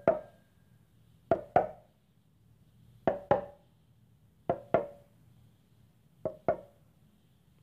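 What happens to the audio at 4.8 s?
Nothing goes wrong at 4.8 s; the sound carries on intact through that moment with no dropout, click or distortion.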